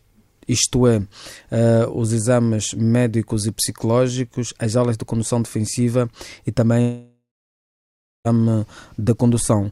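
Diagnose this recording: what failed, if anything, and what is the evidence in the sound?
At 6.81 s the sound stops being itself and turns into a smeared buzz that fades away. Near-silence follows for about 1.0 s, and the audio resumes at 8.27 s with roughly 1.44 s of material simply gone. This is a long network dropout, likely packet loss in transport. The receiver's concealment stretched the last received sound until it gave up. On a spectrogram, that appears as a blurred, decaying band, then an empty gap before content restarts abruptly.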